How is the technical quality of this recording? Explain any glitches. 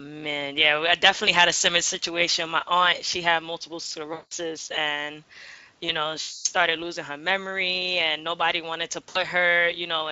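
The recording has three short dropouts of VoIP packet loss concealed by the speech codec, carried over a lightly coded Speex stream, at 4.13–4.32 s, 6.21–6.47 s and 9.09–9.18 s. The decoder extrapolates the lost 180, 240 and 60 ms, producing buzzy, fading smears that appear as decaying, smeared harmonics on a spectrogram and a shrinking envelope on the waveform.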